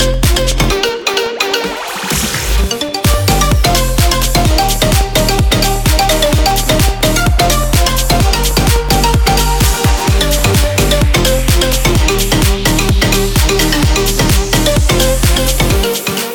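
A driver or USB stall recurs every 0.125 s from 0.14 to 11.39 s, silencing roughly a millisecond each time: periodic USB or driver dropouts, heard as steady ticks.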